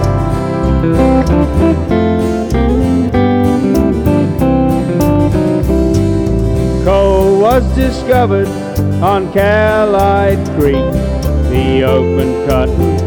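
Throughout the clip, the loudest moments carry a brief crackle and a thin edge of grit, while quieter passages stay clean. This is hard clipping: the signal was driven about 4 dB beyond what some stage in the chain could pass, so the tallest peaks were sliced flat. Only around one percent of the samples exceed the limit, which is why the damage shows up as short bursts of harmonic crackle on peaks rather than continuous fuzz.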